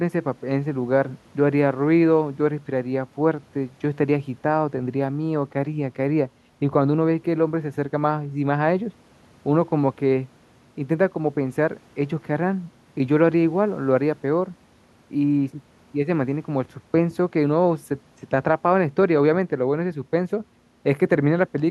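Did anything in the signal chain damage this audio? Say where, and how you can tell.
No, nothing in the chain damaged it.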